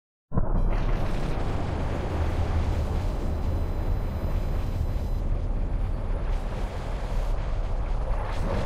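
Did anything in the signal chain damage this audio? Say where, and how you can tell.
Yes: USB whine enters through analogue power or ground wiring from 2.71 to 5.2 s. The 1 ms bus frames produce a fixed 1 kHz tone with harmonics, strongest at 4 kHz and roughly 35 dB below the sound. A spectrogram shows flat horizontal lines.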